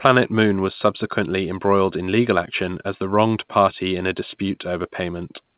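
No faults are present in the speech; the G.711 A-law telephone coding at 8 kHz sampling is working as intended, with the expected 4 kHz band limit and low level-tracking quantisation noise.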